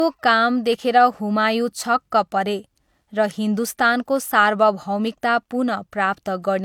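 Speech throughout carries the artefacts of a heavily compressed source, with content extending up to about 20.2 kHz and nothing beyond. The pattern fits low-bitrate audio saved at a high bitrate: the sound was likely first squeezed through an HE-AAC encoder at around 48 kbit/s, then re-encoded as MP3 at something like 192 kbit/s. The larger second file cannot restore detail the first pass discarded, so its artefacts survive intact.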